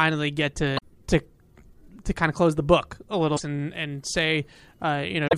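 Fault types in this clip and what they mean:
Damaged data in a compressed stream: Parts of the coded speech stream are corrupt. The decoder misreads those frames and loses sync until it finds a valid header. Three brief disruptions result, near 0.75 s, 3.33 s after "close the book a", and 5.24 s.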